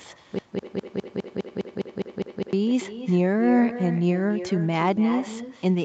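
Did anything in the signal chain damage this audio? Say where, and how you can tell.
Yes. Echo with no canceller at the call-processing stage: every phrase returns about 12 dB down roughly 0.3 s later, quieter and thinner, as the far loudspeaker feeds the microphone.

Broken-record loop from 0.39 to 2.53 s: a 204 ms fragment repeats ten times back to back, likely a stalled stream resending its last buffer, so the intended audio is lost.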